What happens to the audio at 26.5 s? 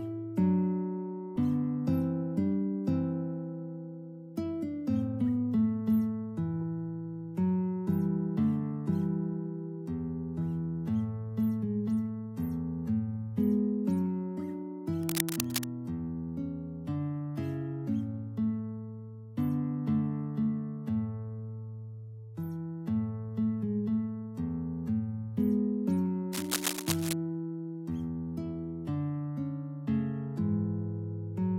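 A burst of scratching, rustling noise sits over the sound from 26.32 s to 27.13 s, lasting about 0.8 s, loud enough to nearly match the sound beneath it at roughly 5 dB below. This is cable scratch noise, likely caused by a worn cable, connector or control being moved. As the contact shifts, its resistance jumps about rapidly, and those fluctuations inject dense, irregular bursts of noise into the signal for that brief stretch.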